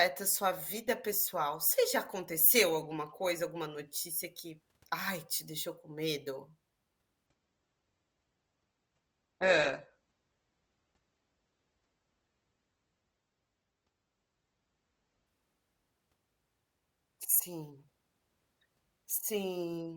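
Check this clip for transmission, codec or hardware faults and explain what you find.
One fault shows up here: an adaptive stream at a lower bitrate, from 7.27 s to 15.27 s. For those eight seconds the speech switches abruptly to a thinner, more processed quality, with nothing above about 8.3 kHz, then snaps back. There's no gap at either switch. That pattern fits the player falling back from roughly 64 kbit/s Opus to about 12 kbit/s while the connection slowed.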